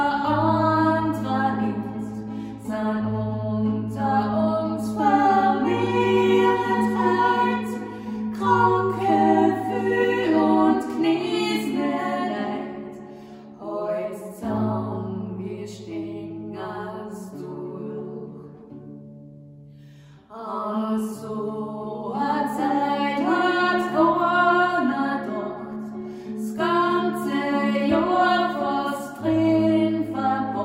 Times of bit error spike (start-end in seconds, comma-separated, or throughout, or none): none